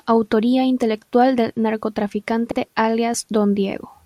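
Repeated frames at 2.51 to 2.58 s: a 64 ms stretch of the speech plays twice in a row, heard as a brief stutter. The duplicated block fits a pair of compressed frames being written or sent twice, so the decoder replays them and the audio grows by 64 ms.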